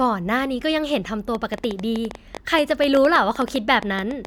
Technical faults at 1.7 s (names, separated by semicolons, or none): train of clicks